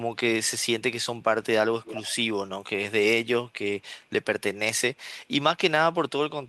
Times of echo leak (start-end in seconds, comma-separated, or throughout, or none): 1.83-2.16